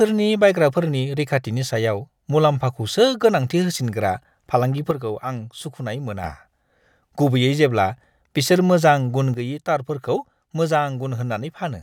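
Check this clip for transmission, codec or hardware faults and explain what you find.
Two sudden gain jumps drop the level of this speech clip. The gain was likely stepped down abruptly, with no ramp, from 4.91 to 6.24 s and again from 9.34 s to the end. Speech and background noise fall together by about 6 dB at once.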